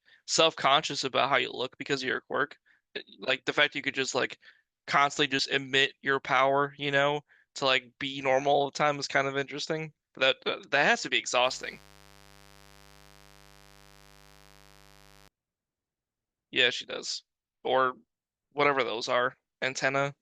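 At 5.39 to 5.41 s an overlap between stream segments removes about 23 ms, so the speech jumps in a tiny skip, unlike a dropout, which leaves silence. From 11.43 to 15.28 s a raspy mains buzz, built on 50 Hz harmonics, sits well below the speech, steadier and harsher than a smooth hum.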